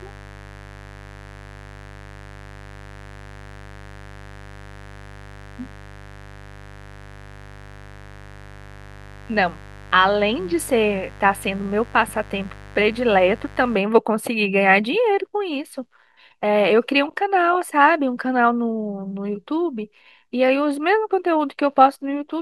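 An unshielded or dimmer-fed path admits 50 Hz switching spikes, so mains buzz rasps steadily under the speech from 0.0 to 13.8 s, well below it.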